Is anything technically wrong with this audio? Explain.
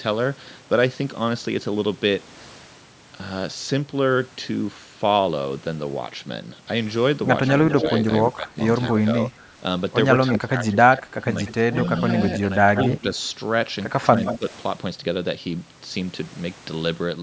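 Yes. Between 7.47 and 8.93 s, and again from 10.27 to 14.38 s, there is echo leak: a delayed copy of the speech, trailing by 187 ms and then 172 ms, at about 5 and then 10 dB below the direct sound. The likely cause is a loudspeaker-side echo canceller passing residual pickup back. The audio is band-limited to 8 kHz by the call microphone processing.

Speech suppressed in double talk appears from 7.82 to 11.26 s, with dips of around 20 dB totalling about a second and a half. Shorter, shallower dips of around 10 dB occur at 12.67 to 12.97 s and 14.36 to 14.45 s. This is likely the canceller attenuating the talker during overlapping speech.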